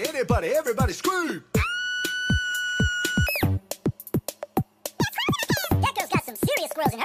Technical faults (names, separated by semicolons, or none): section at the wrong speed